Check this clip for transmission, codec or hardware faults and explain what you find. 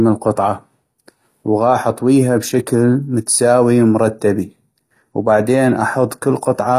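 One codec fault runs through the whole recording. HE-AAC compression, throughout: the sound points to a codec that codes only the lower spectrum and likely rebuilds the treble by copying lower bands upward, which fits a low bitrate around 24 kbps. Nothing remains above 14.9 kHz, and s sounds turn gritty, metallic and lispy.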